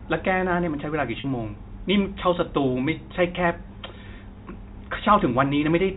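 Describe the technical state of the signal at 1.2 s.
Packet loss with pitch repetition: about 40 ms went missing from 1.20 to 1.24 s, consistent with two 20 ms packets. The receiver looped the last pitch cycle, briefly holding the speech on a slightly buzzy tone.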